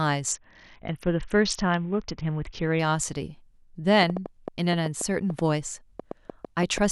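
From 0.33 to 2.80 s comes a Bluetooth SBC bit pool drop. The link squeezed the encoder's bit budget, consistent with a fall from bit pool 28 to 6, near 60 kbps. The treble goes dull and grainy grit rises, unlike a simple low-pass, which stays clean.

From 4.03 to 6.79 s a train of clicks ticks over the speech, about fifteen alike pulses at an uneven 5.5 per second, peaking around 10 dB above it. Their repeated shape and presence in pauses set them apart from dropout gaps. Interference from nearby equipment or a faulty connection or power supply is the likely cause.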